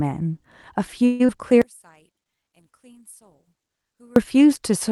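Around 1.05 s the speech stops being fresh and turns into a smeared buzz that keeps the last sound going and fades over roughly a quarter of a second. When the voice returns at 1.30 s, a short piece of it, about 140 ms, is simply gone, and the timing afterwards sits slightly later. This is likely a long network dropout: packets stopped arriving, the receiver filled the gap by extending what it last had, and the lost stretch was never recovered.

From 1.62 s to 4.16 s, heard as mono, the voice collapses to a faint trace, sinking by about 34 dB. That behaviour points to one channel inverted. With one side's polarity flipped, the centred speech that both channels share cancels itself when they are summed, leaving only the small difference between them. The likely cause is a polarity reversal somewhere in one channel's path.

Inside that stretch, from 1.83 s to 2.64 s, the speech also drags, running at about 88% of normal speed while keeping its pitch. 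Sounds are drawn out, adding about 109 ms overall. This is a jitter buffer slow-down: to rebuild its reserve, the receiver repeated small pitch-period slices over and over, stretching the audio in time without changing how high it sounds.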